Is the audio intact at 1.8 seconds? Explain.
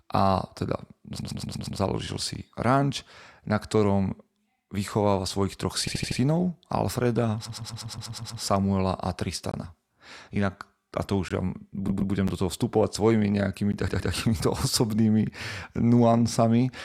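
No. The clip is just leaving a repeated-frames stutter that runs from 1.19 to 1.79 s. A 120 ms block replays five extra times, adding 600 ms. On a spectrogram, identical 120 ms patterns tile side by side.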